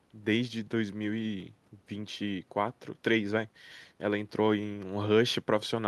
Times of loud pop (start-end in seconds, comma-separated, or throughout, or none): none